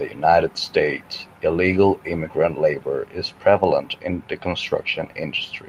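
At 2.41 to 2.43 s, before "labor is prevalent in", a rough, noisy patch with no gap: a lost packet rebuilt from error correction's low-bitrate copy.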